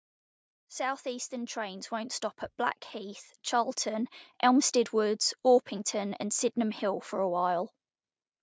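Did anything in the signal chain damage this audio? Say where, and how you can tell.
Yes, at the call processing stage: automatic gain rising from 0.83 to 2.22 s and again from 2.91 to 4.77 s. Voice and room noise swell together by about 5 dB each time, as the AGC keeps boosting what it hears as quiet input.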